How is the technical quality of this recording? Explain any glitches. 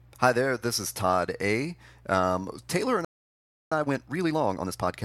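The recording has two linked glitches near the end of the speech.

Playback stall, 3.05 to 3.72 s: the sound cuts out for about 0.67 s, likely because the player's buffer ran dry. The waveform shows a flat gap, and the spectrogram shows a blank vertical band.

Time-compressed catch-up, 3.72 to 4.94 s: the player trims its backlog, so the speech runs at 1.5 times normal speed without rising in pitch. The spectrogram shows squeezed syllables.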